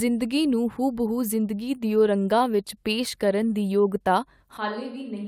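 A speech clip with three network and capture faults. Scattered short gaps: just after "ਨੂੰ ਹੂਬਹੂ", from 1.65 to 2.55 s, about five lost or late packets were patched by extending the last sound, each no longer than about 15 ms, leaving brief ticks and smears. Jitter buffer slow-down: from 3.25 to 4.13 s the receiver repeated pitch periods to rebuild its reserve, adding 56 ms, so the speech plays at 94% speed with unchanged pitch and drawn-out sounds. Likely a switch to a distant microphone: from 4.57 s to the end, the speech abruptly turns roomy and hollow, with thinner bass, a level about 10 dB lower, and background noise about 35 dB below the speech.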